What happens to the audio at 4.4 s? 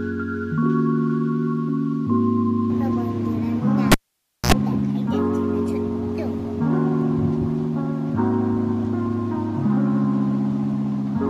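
A cable pulled and plugged in, from 3.92 to 4.52 s: a pop, about 0.56 s of near silence, a 60 Hz buzz burst, then another pop.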